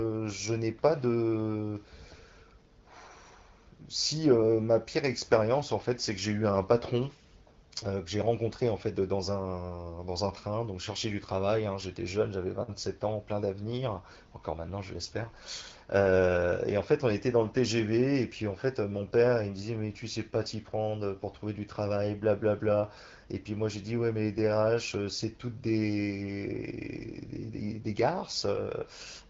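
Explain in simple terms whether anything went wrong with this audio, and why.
Nothing went wrong that I could hear: the speech comes through the wideband HD Voice phone codec as expected, and no problem stood out on listening.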